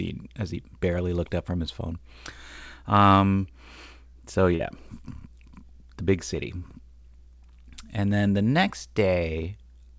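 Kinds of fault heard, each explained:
Short concealed packet loss: Between 4.56 and 4.61 s, about 40 ms of the speech did not reach the decoder in time. The receiver covered roughly 35 ms of that gap by extending the preceding sound, continuing its pitch if voiced or generating shaped noise if not, and then blended back into the real signal. This shows as a brief smear in the speech, heard over a call path with nothing above 8 kHz.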